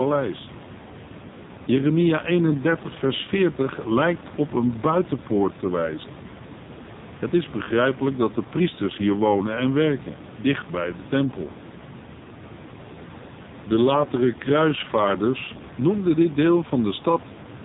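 From start to finish the speech carries the sound of the AMR narrowband mobile codec, heavily damaged. Nothing reaches above about 3.8 kHz, and the voice turns buzzy and synthetic because each 5 ms is rebuilt from a vocal-tract model driven by only a few pulses, which fits a low mode near 5.9 kbps. The room noise, about 15 dB below the speech, swirls and warbles. A plain low-pass filter would dull the sound but leave it natural, without that buzz or warble.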